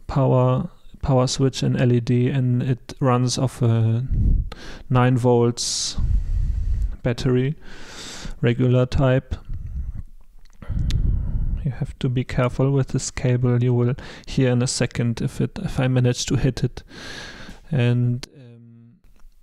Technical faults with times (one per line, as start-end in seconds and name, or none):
18.24-19.04 one channel inverted